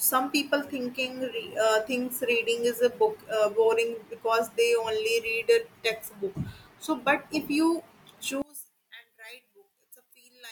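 At 8.42 s the speech suddenly drops by about 22 dB and stays down until the end at 10.52 s. What remains is faint. The centred voice and its low end almost disappear. The likely cause is one channel inverted. One stereo channel has its polarity flipped. When both channels are summed to mono, everything they share cancels. Only the small difference between them survives, heard as a faint copy.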